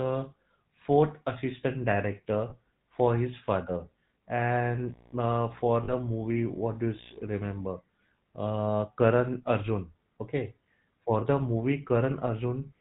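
The speech passes through the GSM full-rate codec for its whole length, which fits a 13 kbps stream. The vocal tract is rebuilt from a model driven by a sparse, regularly spaced pulse excitation, with nothing kept above 4 kHz, so the speech is dull and plainly buzzy and gravelly throughout.

At 2.50 to 2.53 s, and again at 5.84 to 5.93 s, lost GSM frames occur. The decoder covers each gap by repeating the last good frame's settings. This gives a short, rough metallic ring, about 20 ms long the first time and about 40 ms the second.

From 4.66 to 7.67 s, video or display buzz leaks in as a screen or video cable couples into the audio path. It adds a buzz at the 59.94 Hz field rate, with hash above it and a 15.7 kHz line-rate whine, roughly 25 dB below the speech. The second frame loss falls within this stretch.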